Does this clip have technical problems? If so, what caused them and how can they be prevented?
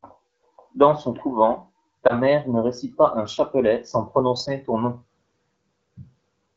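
Yes. There is one lost AMR speech frame at 2.08 to 2.13 s, between "son couvent" and "mère ne récite pas". Radio errors corrupted the frame so it failed its checksum. The decoder then reused the previous frame's pitch and vocal tract settings at reduced gain, producing a brief dip or warble that fits a single missing 20 ms frame. The wideband AMR coding around it stays clear, and speech comes back weak or rough for a moment after. Better radio coverage or stronger channel error protection would prevent such frame losses.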